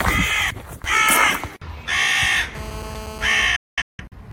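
From 2.55 to 3.46 s, a hard, raspy buzz sits about 13 dB below the sound. This is GSM phone buzz. A 2G phone close by, steady as in a call, transmits 217 bursts a second. The audio circuit rectifies them into a 217 Hz tone rich in harmonics. From 3.56 to 4.15 s comes a digital broadcast dropout. The receiver lost good frames and muted with a fade of about 3 ms. Several short holes total about 0.43 s, the longest 0.21 s. That audio is gone.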